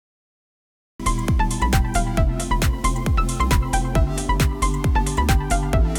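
Capture began late, producing a cut-off start: digital silence runs from 0.0 to 1.0 s, then the sound enters abruptly mid-event, with no natural attack or fade-in.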